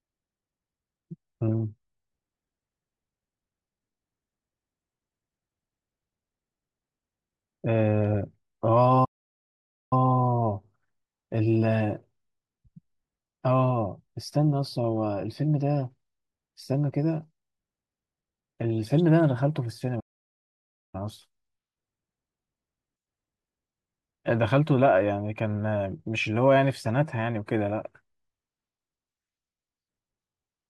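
The speech cuts out twice in mid-flow: from 9.04 to 9.93 s, a gap of about 0.87 s, and again from 20.00 to 20.95 s, about 0.94 s. Both are playback stalls. The output drops to silence, then the talking picks up again. The likely cause is the player running dry on data or its thread getting blocked, so nothing reached the output until it caught up.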